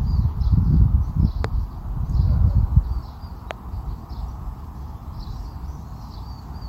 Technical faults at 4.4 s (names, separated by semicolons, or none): none